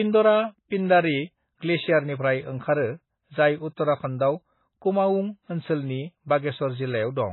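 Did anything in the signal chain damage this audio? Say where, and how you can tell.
Yes. Throughout, the speech sounds watery and swirly, with nothing above 4 kHz and smeared consonant attacks. The likely cause is heavy MP3 compression at the codec stage. Its starved bit budget, which fits roughly 16 kbps, cuts the treble and drops weak frequency lines frame by frame.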